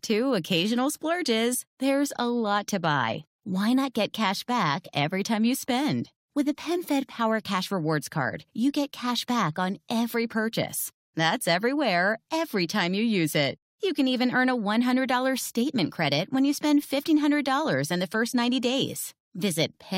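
No technical faults turn up anywhere in the signal.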